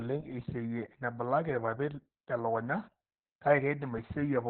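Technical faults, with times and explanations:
Throughout, Opus voice compression: nothing above 4.1 kHz, and coarse SILK excitation leaves speech hoarse and slightly robotic, unlike a plain low-pass, which fits roughly 8 kbps narrowband.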